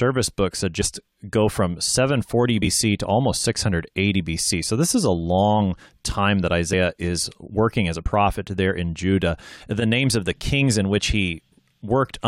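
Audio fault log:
0.80–0.82 s, 2.59–2.67 s, 6.72 s and 7.98–8.06 s, compressed frames skipped: the speech jumps ahead by roughly 100 ms at the first two and roughly 50 ms at the last two, because whole frames never reached playback.
9.80–9.82 s, corrupt frame decoded: a couple of damaged frames were played despite flipped bits, so misread gains and codes put energy at wrong frequencies. The result is a short glitch peaking at about -15 dBFS, lasting roughly as long as those frames.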